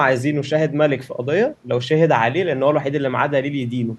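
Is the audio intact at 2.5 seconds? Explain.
Yes, the speech at 2.5 seconds plays through intact, with no audible fault at that moment.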